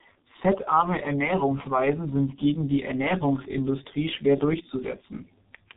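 From start to finish the speech carries tandem speech coding. The roughness and warble point to a low-rate coder, something like G.723.1 at 6.3 kbit/s, applied twice with a G.711 A-law hop in between. The second pass re-codes audio the first pass had already mangled, so its errors stack on top. You hear gritty, muffled, warbly speech, and nothing above 3.8 kHz survives.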